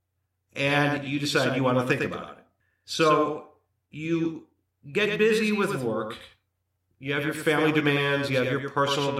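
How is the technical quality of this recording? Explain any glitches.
A doubled audio track runs through the whole speech clip. A second full-band copy trails about a tenth of a second behind, somewhat quieter, giving a dry, flat slapback. Likely cause: a slower duplicate capture path.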